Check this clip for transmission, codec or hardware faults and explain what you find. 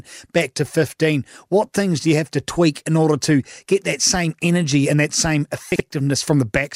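There's one fault here, a short case of chunks out of order at 5.72 to 5.8 s, just after "energy and that same". A 40 ms chunk turned up one slot late and played after its neighbour, so nothing's missing, but that moment sounds jumbled.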